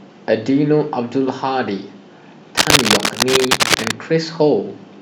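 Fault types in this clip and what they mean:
Cable scratch noise: from about 2.57 s to 3.91 s a dense, ragged scratching and rustling sits over the speech, roughly as loud as the speech itself, so it competes with it for that stretch rather than hiding underneath. The bursts are irregular, not a steady hiss or hum. This is likely a worn cable, connector or control being moved, its contact resistance jumping about quickly and turning those jumps into noise.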